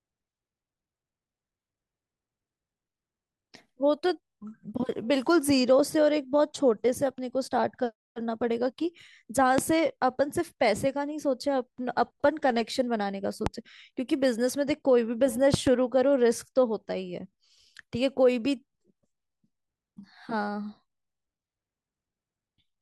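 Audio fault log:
9.58–9.61 s, 13.46–13.49 s, 15.54–15.69 s: loud pop. Single sharp pops at the first two times, a quick pair at the third, each about 15 dB above the speech, which continues underneath. A voltage step from a plug, switch or static discharge is the likely cause.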